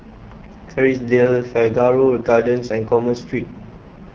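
The speech throughout this short clip carries heavy AMR wideband (HD Voice) codec damage, and it sounds rough and raspy from start to finish, which points to the lowest AMR-WB rate, around 6.6 kbit/s. Up to 6.4 kHz the codec rebuilds the voice from a pulse-excited vocal tract model, so at this rate the excitation coarsens into grit. Above that, up to 7 kHz, the highs are only shaped noise. That false hiss on top, rather than a clean cut-off near 3.4 kHz, is what separates it from narrowband AMR.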